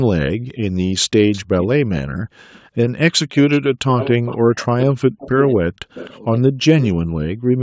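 A speech recording with three echo-canceller faults. From 0.35 to 3.79 s, and again from 6.94 to 7.62 s, the background is gated by the echo canceller: the room tone falls away by up to about 40 dB, roughly a second in the first stretch and under a second in the second. These dips happen while the loudspeaker side is active, which separates them from noise-gate chatter or dropouts. From 1.32 to 6.85 s there is an echo leak. A delayed copy of speech trails the original by 255 ms at about 15 dB below it, likely because a loudspeaker-side echo canceller let part of its microphone pickup through. The fixed 255 ms lag marks it as returned echo rather than room reverberation, which would decay smoothly rather than repeat as a discrete copy. Between 3.95 and 6.4 s, speech is suppressed in double talk. The talker's voice ducks hard, by roughly 40 dB at worst and for around two seconds in total, likely because the canceller couldn't separate this talker from the far side while both spoke at once. 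Unlike the background gating, here the voice itself dips.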